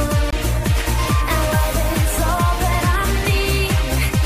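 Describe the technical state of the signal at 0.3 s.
A CD skip occurs from 0.31 to 0.33 s: a jolt or disc flaw throws the laser onto another turn of the spiral, so playback mutes for about 20 ms, then resumes from a different point. Unlike a simple dropout, the sound does not pick up where it left off.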